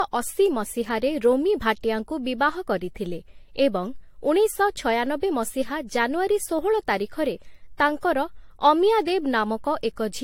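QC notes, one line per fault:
Throughout, generation loss: the speech has likely been through several lossy encode and decode passes, around three, with a character that fits AAC-LC at about 64 kbit/s. Each new pass quantises again on a shifted frame grid, so coding noise and spectral gaps pile up rather than staying put. The result sounds swirly, smeared and hollow beyond what one encode at that rate would leave, consonant attacks are softened, and nothing remains above 16.6 kHz.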